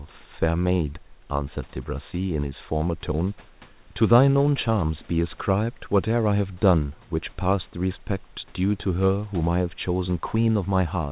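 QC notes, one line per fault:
No faults are heard in this clip. The call path sounds as expected, with nothing above 4 kHz, which fits a G.711 mu-law codec at 64 kbps, and the room noise sits about 34 dB below the speech.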